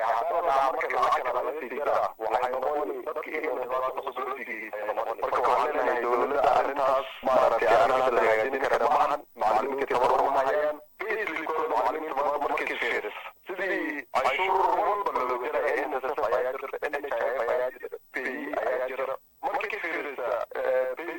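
Throughout the clip, every sound is followed by a second copy at equal level about 93 ms later, heard as a slap echo or doubling. This is channel delay (doubling): one channel runs late, which fits a 4096-sample buffer, and summing to mono exposes the offset copy.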